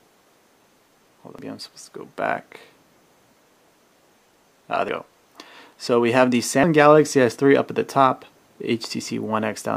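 A recorder likely dropping a short stretch at each chunk handover causes audio missing between chunks at 1.4, 4.9 and 8.4 s: regular abrupt skips, each losing roughly a third of a second.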